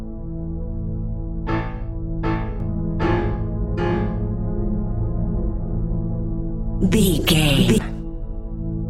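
From 2.60 s to 7.78 s a doubled audio track appears: a full-band second copy trails the original by about 0.7 s at roughly equal level, with no decay or room colour. It begins and ends abruptly, likely from a slower second capture path.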